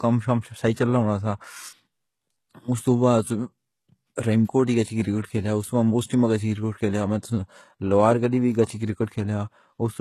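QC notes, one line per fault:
Throughout, HE-AAC compression: the treble is bright but synthetic, with s sounds turning gritty and lispy and nothing above 12.3 kHz. This is likely spectral band replication copying lower bands upward at a very low bitrate, something around 16 kbps.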